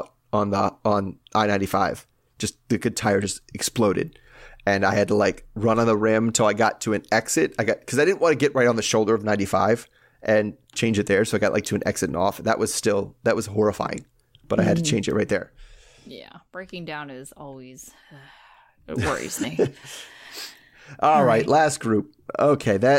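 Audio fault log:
15.03–16.34 s, zipper noise: after "I had to mm" the level drops about ten dB in 2 dB jumps, roughly four a second, each step ticking audibly, until "breaking down is always".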